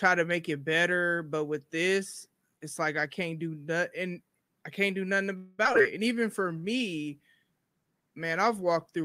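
Right after "I can't do nothing", at 5.37 s, there's a call audio freeze: the last sound hangs on as a fading buzz for about 210 ms until 5.60 s, then carries on where it left off. Nothing's lost, just a gap. It's likely packets got held up and the jitter buffer ran dry.

Straight after, from 5.64 to 5.81 s, comes repeated packet loss with that robotic sound. There are four short holes, the longest 12 ms, each patched by stretching the previous bit, and about 100 ms of audio is simply gone, so it sounds choppy.

Then from 5.98 to 6.95 s there's a jitter buffer slow-down. The receiver rebuilds its reserve by repeating single pitch periods, adding 78 ms. That runs the audio at about 93% speed with the pitch unchanged, so sounds drag out slightly.

Overlapping that, from 6.16 s to the end, there's a call bitrate drop from 64 to 26 kbps. The encoder has far fewer bits to work with, so the sound gets coarser and rougher, and it doesn't recover before the clip finishes.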